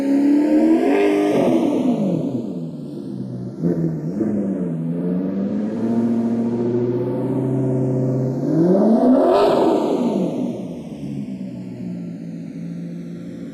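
A recording of sounds with channels drifting apart throughout: separate clocks, roughly 70 ppm off, slide the inter-channel delay to about half a millisecond, giving a slow one-way flange in mono rather than a fixed comb.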